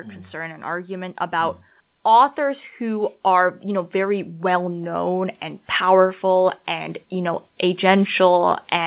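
From 0.3 s to 7.91 s the level climbs steadily. This is automatic gain rising. The gain control judged the input too quiet and kept turning it up, by about 12 dB in all. The speech and the background noise swell together, so the room gets louder along with the talker. Because the change is slow, it sounds like a long fade-up, not a jump. The audio also shows the band limit of a narrowband call codec, with nothing above 4 kHz.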